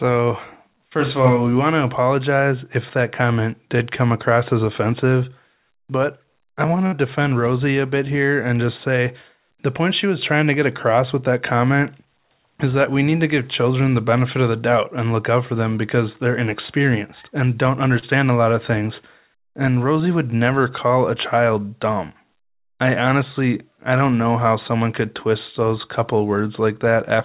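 A speech recording carried over a call path whose narrowband coding leaves nothing above 4 kHz, consistent with G.711 A-law at 64 kbps. A burst of packet loss hits from 6.86 to 6.95 s, right after "offensive but I want": packets were lost or arrived too late, so the receiver extended the last sound for about 60 ms while fading it, then skipped ahead, dropping roughly 60 ms of speech. At 17.99 to 18.05 s, between "they're inexperienced and don't" and "a lot of things", a short concealed packet loss of about 30 ms was patched by continuing the preceding sound and blending back, producing a brief smear.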